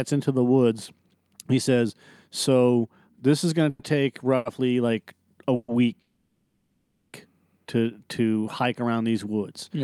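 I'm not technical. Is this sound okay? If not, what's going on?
No, there are a few hiccups in this speech clip, the kind you get on internet calls.

The main one is call audio freeze, at 3.69 to 3.81 s, 5.55 to 5.70 s, and longest at 6.00 to 7.15 s, where it lasts just over a second. The sound hangs on the last bit as a fading buzzy hiss, then carries on where it left off. The likely cause is data arriving late, so the call app ran out of audio and filled the wait. Nothing is lost; the speech just gets pushed later.

There's also one short stall from a late packet at 4.36 to 4.47 s. For about 90 ms one sound is held a touch too long, with a slight buzz, because one piece of audio showed up late and the app stretched what it had until it arrived. Again nothing is missing, just a brief drag.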